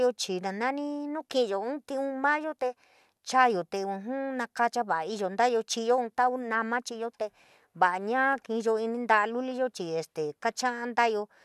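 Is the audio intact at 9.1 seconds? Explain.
Yes, at 9.1 seconds the speech plays through cleanly, with no dropout, click, distortion or other fault at that moment.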